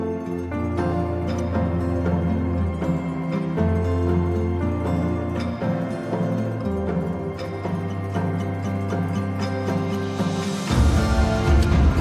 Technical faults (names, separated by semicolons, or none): none